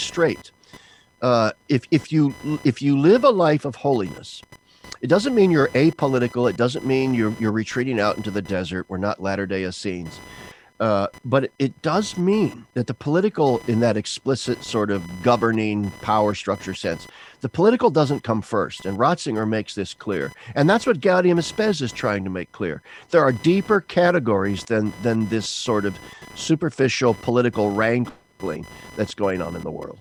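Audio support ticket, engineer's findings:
Computer activity noise, present throughout. Buzzing chirp at around 1 kHz, roughly 25 dB below speech, rising and falling with host load, not with speech. Shared ground between computer and audio circuit modulated by processor, graphics or mouse current draw.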